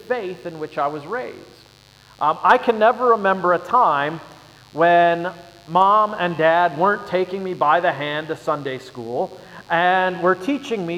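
From start to finish a mains buzz sits under the sound, roughly 30 dB below the signal. Switching spikes from a 50 Hz supply, arriving twice per cycle, have leaked into the path, spreading harmonics well up into the kHz range and producing a constant raspy buzz.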